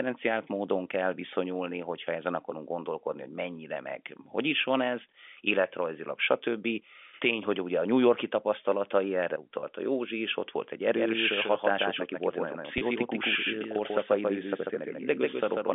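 A speech clip over a G.711 telephone line, band-limited to roughly 250 Hz to 3.5 kHz. Packet loss with pitch repetition occurs twice: single 30 ms losses at 9.60–9.63 s, just after "tapasztalatai erre", and at 12.78–12.81 s. Each time the receiver bridges the gap by repeating the last pitch period, which briefly holds the sound in a slightly buzzy, sustained tone. From 10.92 s, right after "is ott volt egy", to the end, a doubled audio track appears, likely from a second, slower capture path. A full-band copy roughly 5 dB quieter trails by about 150 ms with no room colour and begins abruptly, giving a hard, slapback echo.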